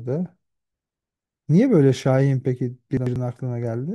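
A speech clip with one instance of chunks out of order between 2.97 and 3.16 s. A block of audio about 93 ms long plays one chunk late, after the block that should follow it, so the two segments swap places. Nothing is missing, but the reordered stretch sounds briefly jumbled, with three hard joins where unrelated waveform edges meet.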